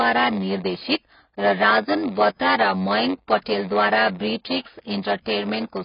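From start to finish, a block size mismatch (padded) puts a steady buzz at 93.8 Hz and slows the speech to 0.938 speed, which fits 512-sample reads with zeros filling each block; a regular buzz tells it apart from random dropouts. Throughout, the speech also sounds heavily dull and smeared, with nothing above 5.1 kHz. That points to AAC compression at a low bitrate, likely AAC-LC around 16 kbps, rather than a simple low-pass filter, which would not smear.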